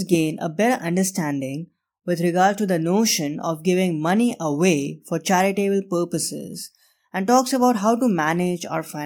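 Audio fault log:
Nothing faulty is audible anywhere in the speech.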